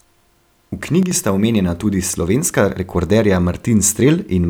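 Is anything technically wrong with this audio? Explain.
Yes. From 1.03 to 1.11 s the speech drops abruptly by about 6 dB, then returns at full level, most likely one channel dropping out: one stereo side vanishes briefly, so the mono sum halves. Unlike a full dropout, the sound never goes silent, only quieter.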